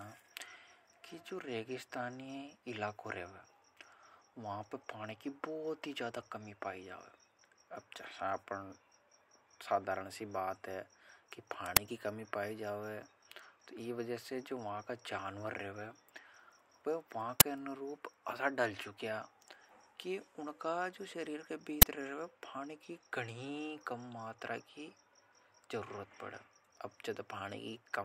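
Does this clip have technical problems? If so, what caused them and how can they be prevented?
Yes. An uninitialised buffer fault occurs three times in this speech, at 11.77 s, 17.40 s and 21.82 s. Each time, a buffer went to the output before any audio was written into it, so stale memory contents played as samples. The result is a sudden, loud crack lasting about 10.7 ms. That length fits a 512-sample buffer. On a waveform each crack is a narrow block of sudden large values, and on a spectrogram it is a thin vertical broadband stripe. Zero-fill every buffer on allocation and output silence whenever data isn't ready in time.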